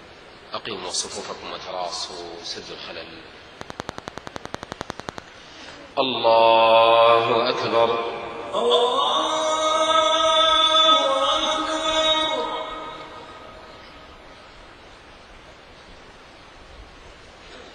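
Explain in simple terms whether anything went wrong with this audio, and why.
Between 3.61 and 5.19 s there is a train of clicks: a run of sharp, identical ticks repeating evenly, about eleven times per second, roughly twenty in all. They sit on top of the sound and stand out clearly above it. Because each click has the same shape and they arrive at a steady pace, they come from an outside source rather than the recording itself, likely electrical interference from nearby equipment or a faulty connection or power supply.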